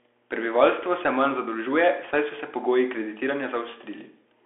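A ground loop or nearby transformer has coupled the power line into this speech recording, leaving a steady 60 Hz mains hum, roughly 30 dB below the speech, running the whole way through. The audio has also passed through a Bluetooth CVSD headset codec, whose one-bit adaptive coding fits a 64 kbps stream. It narrows the speech to about 300 Hz to 3.4 kHz with nothing above 3.8 kHz, and its plainly audible damage adds scratchy sibilants and a granular hiss throughout.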